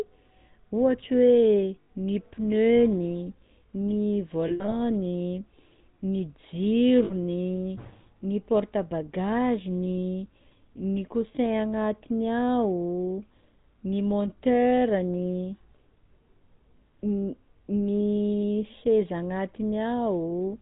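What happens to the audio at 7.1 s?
From 7.04 to 7.12 s the GSM stream loses frames, a gap that fits about three 20 ms frames. The decoder repeats the last good frame's settings, so the sound freezes into a short, rough, metallic ring instead of dropping to silence or clicking like a plain dropout. This sits on top of the buzzy, gravelly GSM full-rate codec sound present throughout, which cuts everything above 4 kHz.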